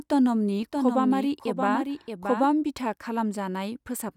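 Speech, with a doubled audio track from 0.63 to 2.47 s: a second full-band copy trails about 0.7 s behind, a few dB quieter, likely from a slower capture path. Unlike an echo, it has no decay or room colour and cuts in and out abruptly.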